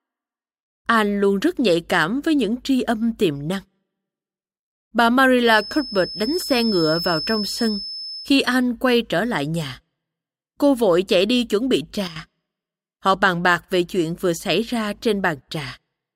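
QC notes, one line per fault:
5.41–8.35 s, feedback whistle: A thin, steady tone at 5.2 kHz sits behind the speech, roughly ten decibels under it, swelling and fading slowly in level and ending just before "anh quay trở lại". The likely cause is a loudspeaker-to-microphone loop held right at the edge of instability. One frequency gets just enough loop gain to keep ringing without building into a howl, which is why it stays low instead of climbing.
12.08–12.16 s, sudden gain jump: Right after "chạy đi chuẩn bị" the level drops by about 10 dB within this span. The speech and the background noise fall together, so the noise floor steps down in the same instant. That points to the likely cause: a digital gain change applied from one sample to the next with no ramp, such as a level setting or bit shift switched in abruptly rather than faded.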